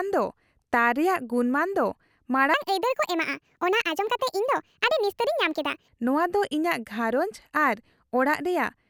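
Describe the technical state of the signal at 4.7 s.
At 4.7 s the playback is running at the wrong sample rate, from 2.54 s to 5.88 s, without conversion, which fits 32 kHz audio being played out at 48 kHz. The speech runs 1.5 times too fast and about 7 semitones high, sounding hurried and squeaky.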